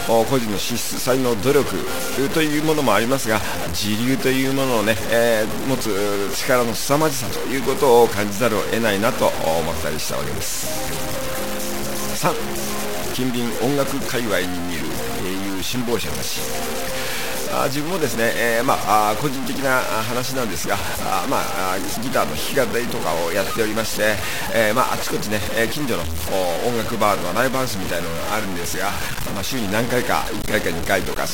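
From start to finish there's a coarse, grainy distortion riding on everything and shifting with the sound, and the quietest moments sputter or drop to silence. That's likely low bit depth without dither: 4 bits, truncated, leaving the error only about 10 dB below the signal.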